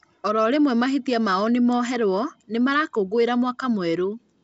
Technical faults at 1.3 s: none

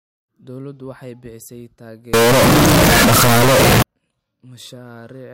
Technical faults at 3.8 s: signed and unsigned mixed up

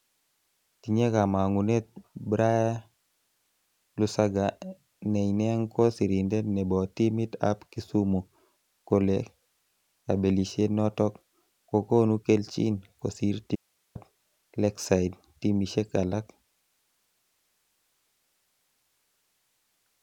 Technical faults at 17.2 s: none

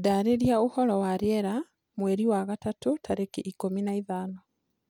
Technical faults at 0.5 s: none

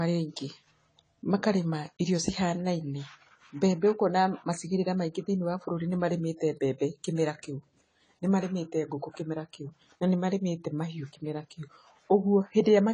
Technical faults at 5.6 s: low-bitrate audio saved at a high bitrate

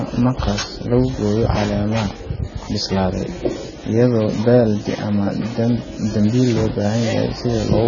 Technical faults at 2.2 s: AAC compression

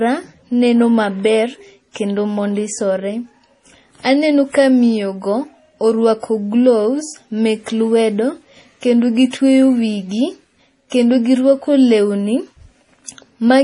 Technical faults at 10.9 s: MP3 compression; pre-echo

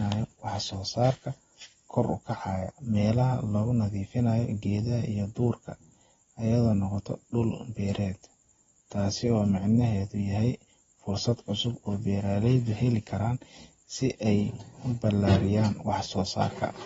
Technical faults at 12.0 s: AAC compression

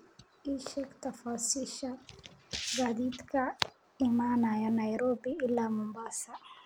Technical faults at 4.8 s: filter restarted on every block

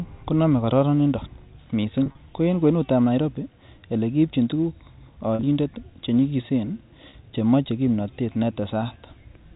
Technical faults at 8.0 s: none

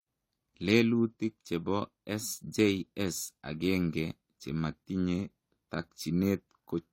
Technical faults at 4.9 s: transcoding between lossy codecs

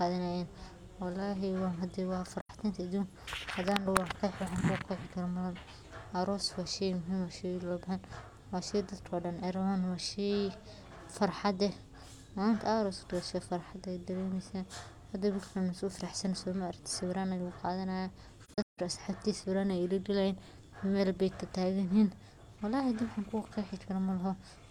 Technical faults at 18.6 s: AAC frame loss with muting

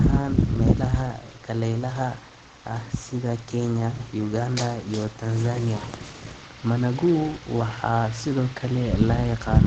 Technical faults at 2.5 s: Opus compression

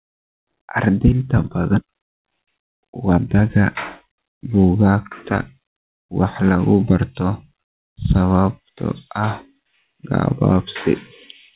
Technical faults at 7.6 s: none

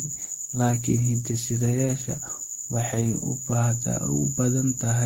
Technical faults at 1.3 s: adaptive stream starting at a low bitrate

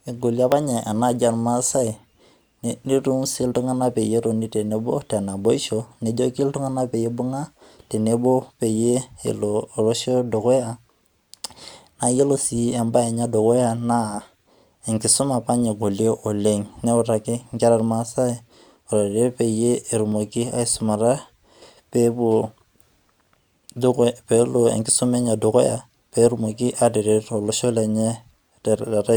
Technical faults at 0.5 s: dropped buffer (overrun)

